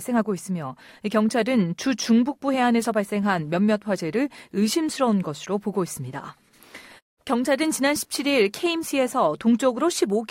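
No technical faults are audible.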